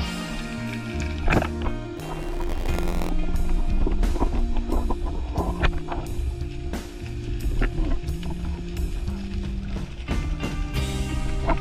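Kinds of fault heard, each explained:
Buffer tearing: From 1.96 to 3.10 s a rough, mechanical buzz near 86.1 Hz rides on the sound and is present only while signal plays. The program filling the ring buffer and the hardware draining it have drifted into collision, so within each period a small slice of audio from one lap back, some 40 ms old, gets spliced in with abrupt seams on both edges. The repetition rate fits a 512-sample buffer.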